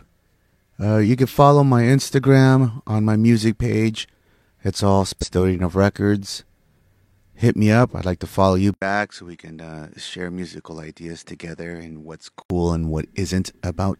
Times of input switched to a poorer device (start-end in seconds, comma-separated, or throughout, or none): 8.74-12.50